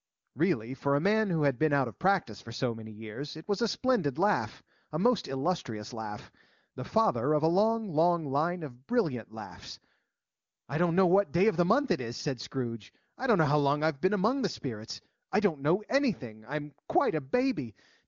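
No technical faults are audible.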